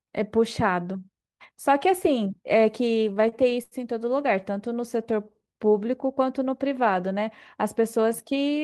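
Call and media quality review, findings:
Repeated stalls (stutter), 3.07 to 3.74 s. Six short hitches, longest 84 ms. Jitter buffer ran dry repeatedly. Receiver stretched the last sound to fill 161 ms, about a quarter of the span. Nothing lost. Speech drags.

Jitter buffer slow-down, 4.96 to 5.66 s. Speech about 6% slow, pitch unchanged. Buffer rebuilding its reserve. Repeated single pitch periods add 43 ms. Sounds drawn out. Opus call path throughout, top end ending near 12 kHz.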